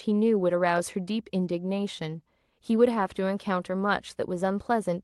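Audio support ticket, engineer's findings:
No audible defects in the speech across the clip; no component implicated, no action required.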